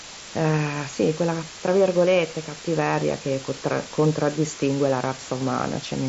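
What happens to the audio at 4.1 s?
At 4.1 s the speech sits under a steady, even hiss from low bit depth with dither, present throughout the clip. Only 5 bits remain, and the added dither turns rounding error into white noise roughly 15 dB below the speech. A spectrogram shows a flat noise floor up to the 7.7 kHz codec ceiling, and the waveform looks fuzzy, never clipped.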